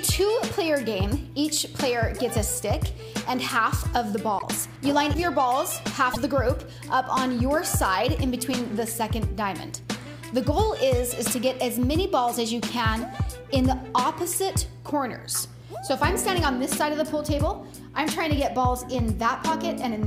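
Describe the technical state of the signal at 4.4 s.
From 4.38 to 4.43 s the audio breaks for about 56 ms and skips forward, a span that fits roughly two 26 ms MP3 frames. The likely cause is a broken MP3 bit reservoir: after lost frames, the next frame borrows bytes that belong to another frame. Spectrogram and waveform show an abrupt discontinuity with a brief chirp, noise burst or hole.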